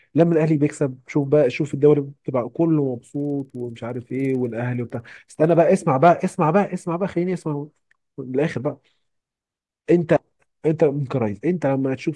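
From 2.95 to 5.65 s the resampler restarted on every block, which fits a 48 kHz to 24 kHz conversion in 50 ms blocks. Each block edge lacks its true neighbouring samples, leaving a small error, heard as a 20 Hz ticking that follows the speech.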